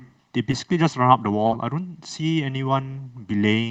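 Channel delay (comb filtering) runs from the start of the speech to the end. One channel trails the other by around a millisecond, and summing them to mono cancels shared content at evenly spaced frequencies, beginning near 500 Hz. The voice sounds hollow and phasey throughout.

Short concealed packet loss occurs at 0.51 to 0.55 s, where about 20 ms of audio never arrived. The receiver filled 14 ms by continuing the preceding sound before blending back into real audio. The result is a brief smear.

Short concealed packet loss returns at 1.47 to 1.53 s, a longer gap of 40 ms with 44 ms of concealment. The extended fill stretches the last sound across the hole, producing a wobble. This runs on top of the call path's coding noise and an upper limit near 8 kHz, consistent with Opus at around 32 kbps.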